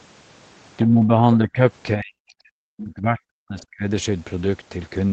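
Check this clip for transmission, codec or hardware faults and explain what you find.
There's one real problem here: speech dropping out during double talk. From 0.84 to 1.59 s the speech dips by about 10 dB, then from 1.95 to 3.87 s it cuts out in chunks, sinking as deep as roughly 40 dB. The likely cause is an echo canceller that couldn't tell the talker from loudspeaker echo and turned both down.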